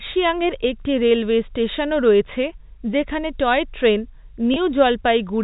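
A short speech recording carried over telephone-band coding, with nothing above 4 kHz. At 4.54 to 4.56 s there is packet loss with pitch repetition. About 20 ms of audio went missing, which fits a single lost packet. The receiver filled the gap by repeating the last pitch period of the voice. Because the gap is so brief, it sounds like a slightly held, buzzy sound rather than a dropout. The speech then picks up again.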